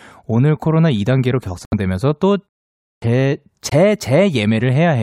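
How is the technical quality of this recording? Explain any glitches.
The speech has three audible glitches: two brief holes in the sound and one word onset that arrives cut off.

Bluetooth dropout, at 1.65 to 1.74 s and 3.69 to 3.73 s: the sound vanishes for about 70 ms, then 23 ms, and resumes as if it had played on. Likely cause: packets reaching the headphones too late and being dropped, consistent with roughly three packets lost, then one.

Clipped start after a pause, at 2.96 to 3.02 s: after a 0.56 s pause, speech starts abruptly with about 61 ms of its beginning missing. The output device had gone idle in the silence and needed time to wake.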